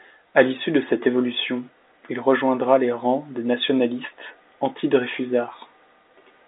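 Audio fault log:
No fault to enter in the audio fault log.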